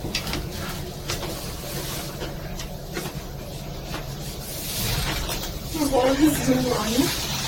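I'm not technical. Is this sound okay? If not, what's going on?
No. Throughout, the sound is swirly, smeared and hollow, with blurred attacks: generation loss, likely from being compressed and re-saved about five times.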